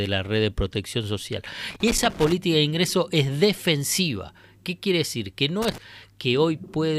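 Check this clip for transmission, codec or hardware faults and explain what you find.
The clip has a hardware fault: loose connector crackle, in two bursts, from 1.70 to 2.32 s and from 5.62 to 5.78 s. A worn or dirty contact in the cable or jack makes and breaks as it shifts, so the speech is chopped in rapid, uneven fragments and any DC on the line turns each break into a pop. The result is a scratchy, irregular crackle. Unlike digital dropouts or buffer clicks, these bursts have no regular spacing or fixed length, and the roughness comes and goes with the disturbance rather than repeating at a steady rate.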